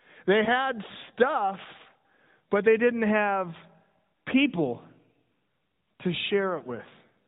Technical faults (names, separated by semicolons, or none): lost AMR speech frames